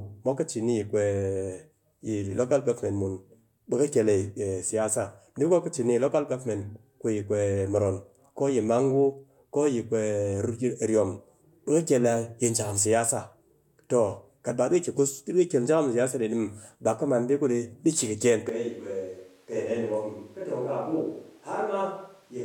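At 18.49 s the voice suddenly turns roomy and hollow and stays that way right to the end. It loses its low end, drops about 5 dB in level, and the background noise comes up to roughly 35 dB below the speech. That's the classic switch to a distant microphone. The close mic's feed most likely dropped out or was left out, so what we're hearing is a mic farther away picking up more of the room.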